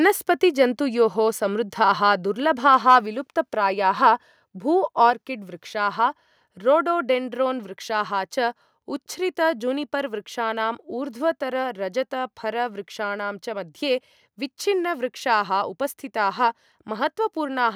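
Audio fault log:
2.73–2.96 s, microphone overload: the loudest syllables turn harsh and crackly as peaks run about 2 dB past the converter's limit, with around one percent of samples flattened. This is likely input gain set too high. It differs from a limiter, which rounds peaks rather than squaring them off.
3.06 s, microphone volume stepped down: voice and background both drop about 2 dB at a single instant, just after the distorted peak, and stay lower. This is likely the call software cutting input volume after detecting clipping. A compressor would instead dip and recover.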